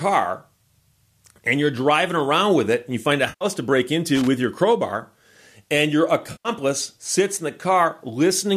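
At 3.29 s, after "and you find a", there is AAC frame loss with concealment. About 120 ms of audio drops out, through 3.45 s. The decoder patches the gap from the last good spectrum. It sounds smeared and noisy, resuming at "to break".

From 4.15 to 4.27 s comes loose connector crackle. A bad contact makes and breaks. The signal is chopped into a short, irregular burst of scratchy crackle before "your crowbar and your".

At 6.32 s a second frame loss hits, about 130 ms long, ending 6.49 s before "sits in the". The low-delay AAC stream, likely AAC-ELD, conceals it with the same smeared patch.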